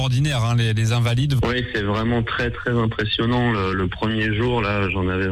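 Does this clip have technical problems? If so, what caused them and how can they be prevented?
No, no technical faults heard.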